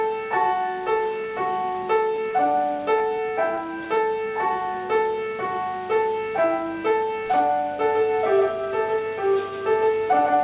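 At 7.81 s a doubled audio track starts abruptly. A dry copy, about 5 dB quieter, trails roughly 150 ms behind to the end, likely from a second capture.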